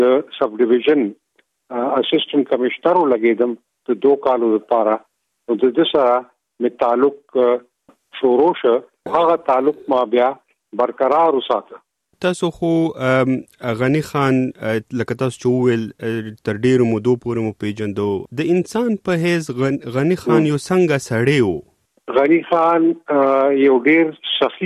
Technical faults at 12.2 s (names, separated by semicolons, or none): none